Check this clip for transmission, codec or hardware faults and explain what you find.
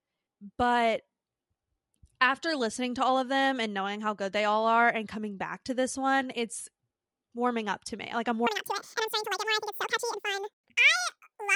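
One fault is present, a wrong sample rate, running from 8.47 s to the end of the clip at 11.55 s. In that section the speech plays exactly twice as fast and a full octave higher, 12 semitones up. Speed and pitch rise together because the samples are clocked out at double the intended rate with no conversion, which fits 24 kHz material played at 48 kHz. The voice sounds high, thin and hurried.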